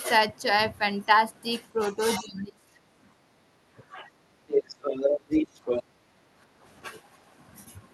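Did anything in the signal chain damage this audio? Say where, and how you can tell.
Yes. The damage happens at the call-processing stage, in the echo canceller. Speech suppressed in double talk is the likely cause of a series of dips in the talker's level at 1.73–2.83 s (the deepest, roughly 25 dB), 3.77–4.09 s, 4.44 s, 5.28–5.59 s and 5.95–6.1 s. In those spans the canceller could not separate the near voice from loudspeaker echo, so it pulled both down. The talker fades or breaks up in pieces.

Background gated by the echo canceller appears at 3.15–3.49 s and 6.38–6.64 s. The room sound sinks by about 8 dB and about 10 dB, then comes back. While the loudspeaker was active, the canceller clamped the microphone hard and then let go. That leaves short holes in the ambience, audible as the noise floor briefly dipping and coming back.

The other side's voice leaking through is the likely explanation for a second voice from 4.48 to 5.83 s, at about the same loudness as the talker. 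The canceller did not subtract all of the far-end sound picked up from the loudspeaker. The residue passes through the Opus call path with the rest of the signal and sits on top of the talker. It overlaps one of the suppression dips at 5.28–5.59 s.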